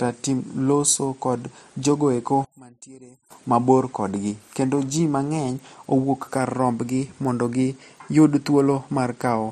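From 2.45 to 3.31 s the speech drops by about 22 dB and turns faint, then recovers just before "mabor kodgi kendo ji". That's the sound of one channel inverted, likely: with one side's polarity flipped, the centred voice cancels on summing to mono, leaving only the faint difference.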